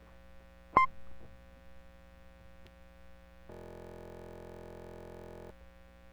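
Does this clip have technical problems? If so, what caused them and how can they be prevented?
Yes. From 3.52 to 5.51 s the music collapses into a system hang loop: a 23.22 ms slice repeats exactly, producing a steady buzz at 43.1 Hz, which fits a 1024-sample ring buffer replayed while the system stalled. Prevent it with stable drivers and larger buffers.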